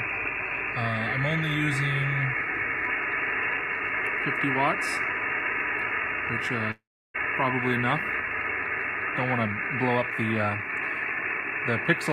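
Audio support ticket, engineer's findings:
Gap 6.71 to 7.16 s: sound smears into a fading buzz, then about 0.32 s of silence, resumes roughly 0.42 s further on. Likely a long network dropout upstream.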